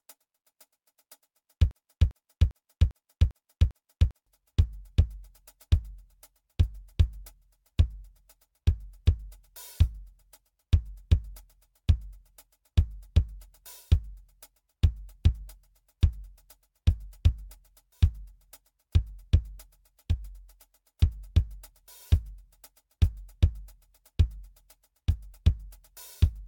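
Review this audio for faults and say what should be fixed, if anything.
Generation loss, throughout: the music sounds swirly, hollow and smeared, with blurred attacks and nothing above 17 kHz, likely from around seven successive AAC-LC re-encodes, which fits a 96 kbit/s chain. Prevent it by encoding once from a lossless master instead of transcoding already compressed files.

Broken-record loop, 1.71 to 4.26 s: a 0.4 s fragment repeats exactly six times back to back, and the music meant for that span is lost, likely because the player or stream stalled and kept resending its last fragment. Prevent it by having the stream or encoder detect stalls and drop or conceal missing data rather than replaying the last buffer.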